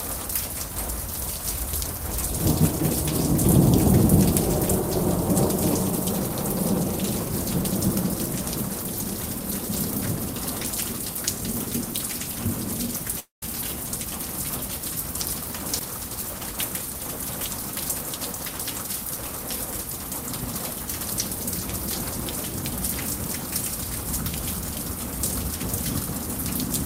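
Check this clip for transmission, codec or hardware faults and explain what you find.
One fault shows up, a long network dropout at 13.19 to 13.43 s. Audio likely stopped arriving, so the receiver stretched the last sound into a fading buzz, then about 140 ms of near silence, and 230 ms never returns.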